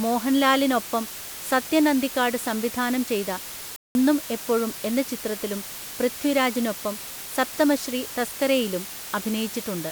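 From the first moment to the end, the speech sits over a loud, even hiss, only around 15 dB below the voice. This is low bit depth with dither: the signal has been rounded to very few levels, which fits roughly 5-bit quantisation, and random dither added before rounding turns the error into steady white noise. Undithered low bit depth would instead give gritty, signal-dependent distortion that vanishes in pauses. Here the hiss stays constant and clean through gaps and loud passages alike.

At 3.76 s the sound cuts out completely for about 190 ms, resuming at 3.95 s. This is a playback stall, likely caused by the player running out of buffered data or its thread being blocked, so nothing reached the output until it recovered. A dropout from packet loss would usually be shorter or filled with concealment artefacts. This gap is silence.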